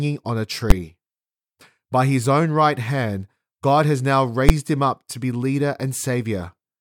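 A speech clip with two sharp bangs, at 0.70 s and 4.49 s, which are invalid numbers at full scale. A calculation blew up to infinite or invalid values that got pinned at maximum level for about 11 ms each time, which fits a 512-sample buffer.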